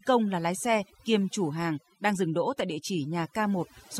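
From the first moment to the last, the speech carries overdone noise removal. The denoiser was pushed too hard, so any frequency band sitting close to its idea of the noise floor gets pulled way down or switched off entirely, and the softer bits of the voice get caught up in that. You hear it as gaps between phrases dropping to near silence with little twinkly specks.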